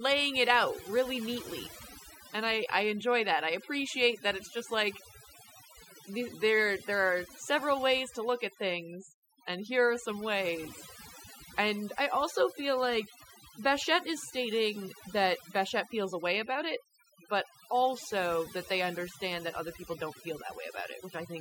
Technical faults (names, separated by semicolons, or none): overdone noise removal